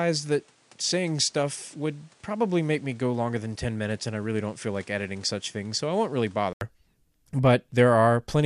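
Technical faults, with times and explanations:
0.00–6.61 s, input switched to a poorer device: likely a lesser microphone, so nothing above 10.9 kHz, a few dB quieter with faint added noise, then 80 ms silence before it clears.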